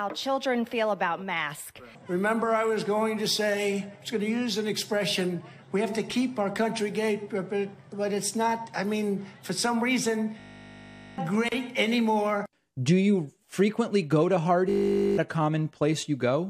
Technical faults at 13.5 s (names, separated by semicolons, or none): none